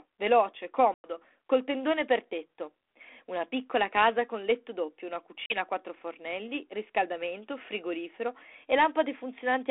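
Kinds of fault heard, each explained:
Packet loss on an ADPCM call: hard-edged silent gaps near 0.94 s (about 100 ms, roughly five packets) and 5.46 s, where the decoder's prediction loses step, so audio returns slightly distorted before settling.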